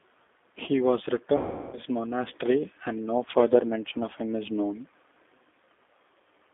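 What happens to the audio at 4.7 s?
At 4.7 s you're hearing the same G.729 codec coloring that runs through the whole speech clip. Nothing changes at that moment. The band is squeezed to roughly 250 Hz to 3.6 kHz, so it's thin and muffled. The damage is plainly audible: a rough, slightly synthetic edge, because the codec rebuilds the voice from a vocal tract model, a pitch predictor and a few pulses per frame, which fits an 8 kbit/s telephony stream.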